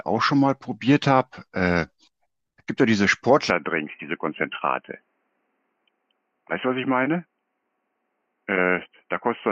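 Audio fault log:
3.50 s to end, input switched to a poorer device: the speech abruptly narrows to nothing above 3.1 kHz and turns dull and boxy, with no gap and little level change, plus a faint new noise floor roughly 50 dB down, likely from a changed microphone.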